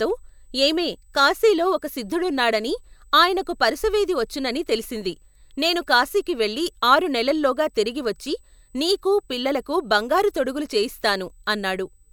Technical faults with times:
0.00-12.12 USB whine

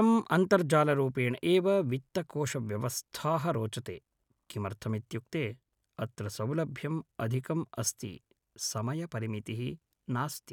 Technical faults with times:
none

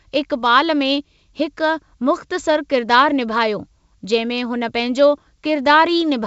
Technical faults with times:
none

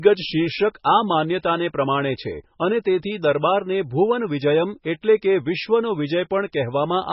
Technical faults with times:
0.00-7.12 MP3 compression

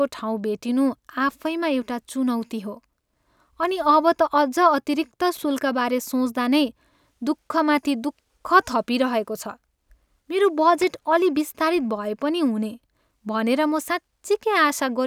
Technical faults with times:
5.36-5.44 loose connector crackle
10.78-10.84 loose connector crackle

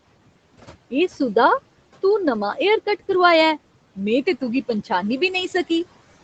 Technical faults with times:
0.00-6.24 noise suppressor artifacts

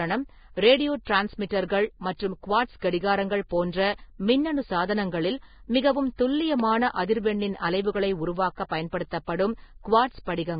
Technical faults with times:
0.00-10.59 Vorbis compression

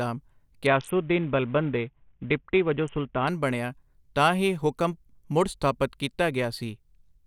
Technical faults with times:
0.66-3.27 Bluetooth SBC bit pool drop

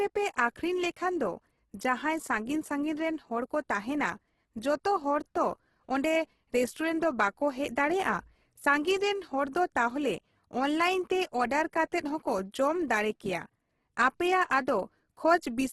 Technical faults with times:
0.00-15.72 Opus compression

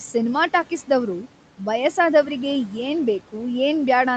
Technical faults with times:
none

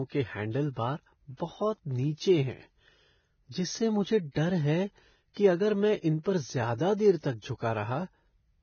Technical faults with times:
0.00-8.62 Vorbis compression
1.37-1.40 pre-echo
6.23-6.26 pre-echo

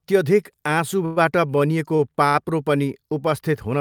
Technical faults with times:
1.05-1.18 call audio freeze
1.96-2.01 short stall from a late packet
2.29-2.36 short stall from a late packet

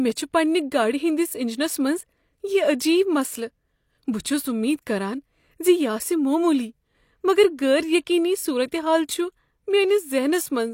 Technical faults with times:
4.23 pre-echo

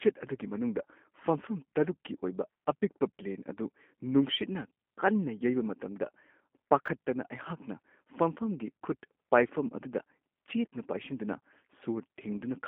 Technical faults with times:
0.00-12.68 G.729 codec
6.86 chunks out of order

